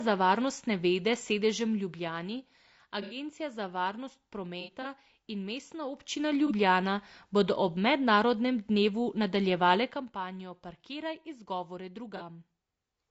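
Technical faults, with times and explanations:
Throughout: low-delay AAC compression, plainly audible as rough, grainy speech with noise between harmonics; likely AAC-ELD at about 32 kbps, whose short frames resolve pitch poorly.
3.02–3.16 s, 4.61–4.86 s, 6.47–6.52 s, 12.17–12.22 s: AAC frame loss with concealment, brief smeared, noisy patches where the decoder rebuilt lost frames from the last good spectrum, about 30 to 120 ms each, the second scattered.
5.92–6.24 s, 9.76–10.12 s: zipper noise, a fast ticking as the level rises roughly 10 dB then later falls roughly 15 dB in unsmoothed 1 dB steps, around 30 per second.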